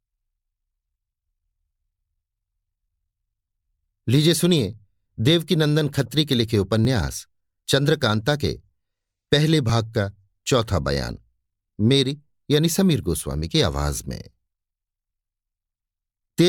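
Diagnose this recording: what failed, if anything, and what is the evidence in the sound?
The capture stage at the driver or buffer level most likely suffered a dropped buffer (overrun): the recording software failed to collect a block of samples before the interface overwrote it. At 6.85 s the speech jumps abruptly, where the audio on either side of the gap is spliced together with no silence between. Only a few milliseconds go missing, so the waveform skips ahead rather than losing any noticeable part of a syllable.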